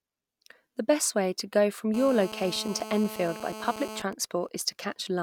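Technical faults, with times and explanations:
1.94–4.02 s GSM phone buzz: just after "way to go from", a hard, raspy 217 Hz buzz rich in harmonics sits steadily under the speech at about 13 dB below it. A nearby 2G phone in a call is transmitting in bursts, and the audio circuitry rectifies those radio pulses.
4.13–4.85 s GSM signalling bursts: a faint pattern of even ticks with a longer 217 Hz buzz twice a second, well below the speech level. A nearby 2G phone in a call is sending only sparse groups of bursts while its user is silent, and the circuit rectifies each group.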